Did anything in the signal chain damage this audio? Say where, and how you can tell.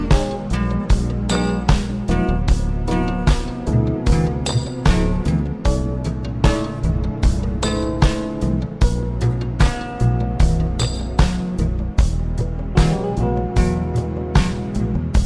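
Yes. The damage is at playback: a wrong sample rate across the whole clip. The sound runs at 0.689 times normal speed and sits 6.45 semitones low, which fits 32 kHz material clocked out at 22 kHz with no resampling, so time stretches and pitch drops together.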